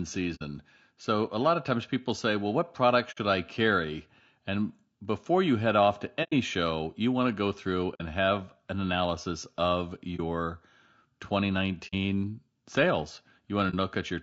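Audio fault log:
Throughout: low-delay AAC compression. The speech sounds rough and grainy, with noise filling the gaps between pitch harmonics and a thin, synthetic-sounding top band. The damage is plainly audible. This likely comes from AAC-ELD, the low-delay codec used in video calls, at a rate that sounds like about 32 kbps. Its very short frames cannot separate closely spaced harmonics well, and the low bitrate leaves too few bits, so detail is lost.
0.35, 3.11, 6.23, 7.94, 10.16, 11.87 and 13.70 s: AAC frame loss with muting. At each point the speech drops into a brief soft-edged hole. Examples are after "what product", before "I carry", after "you head off to" and after "have an analysis of". Most gaps last 60 ms. The ones at 10.16 and 13.70 s last 30 ms, and the one at 6.23 s lasts 90 ms. The decoder zeroed the missing audio, and its overlapping windows fade the sound out and back in.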